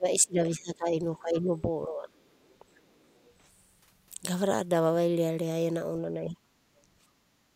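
Speech suppressed in double talk runs from 0.0 to 0.97 s and again from 1.16 to 2.11 s. The talker's level sinks by something like 20 dB in the first stretch and around 15 dB in the second, for roughly 0.7 s in each. Parts of the voice thin out or vanish in pieces. The likely cause is an echo canceller that could not separate the near talker from loudspeaker echo while both sides spoke, and so turned everything down together.

The other side's voice leaking through follows at 2.17 to 2.57 s and 2.74 to 3.32 s. A second, faint voice sits far beneath the main speech, some 35 dB lower. It points to loudspeaker playback picked up by the microphone and not fully cancelled.

The same double-talk suppression returns later. From 6.02 to 6.40 s the voice dips by around 10 dB. From 6.83 to 6.87 s there is a brief notch of roughly 15 dB, lasting only a few tens of milliseconds, which sounds like a small bite out of the speech.

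Background gated by the echo canceller closes the clip at 7.21 to 7.41 s. The room sound drops by about 6 dB for 0.2 s and then comes back. The microphone was held down while the loudspeaker played, and the ambience recovers once the canceller releases.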